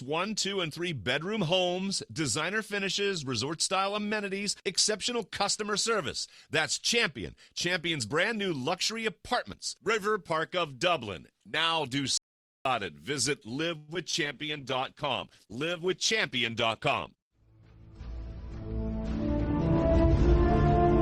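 At 12.17 s an audio dropout to silence begins, likely from a lost input. For 0.48 s the waveform is flat and the spectrogram is blank, with no room tone.

From 13.77 to 13.90 s a call audio freeze stretches the last sound into a fading buzz for 0.11 s. This was likely caused by delayed packets. Nothing is lost, but a smeared band appears on the spectrogram.

Short concealed packet loss follows at 13.94 to 13.97 s and 14.11 to 14.15 s. Each is a brief wobble where about 20 ms was lost, and each shows as a tiny smeared blip.

A call bitrate drop runs from 14.25 to 17.54 s, falling from 48 to 14 kbps. The sound turns rough and muffled, and the spectrogram's upper frequencies go empty.

Overlapping it, a jitter buffer speed-up from 15.80 to 18.48 s plays the sound 3% fast at unchanged pitch. About a tenth of a second is trimmed away, which is invisible on a spectrogram.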